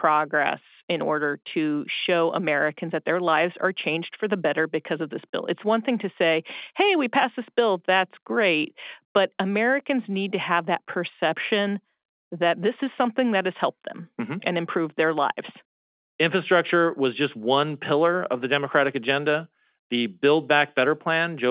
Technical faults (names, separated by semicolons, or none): none